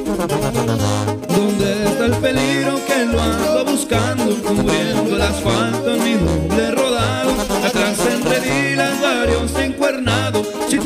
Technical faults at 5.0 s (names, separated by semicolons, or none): none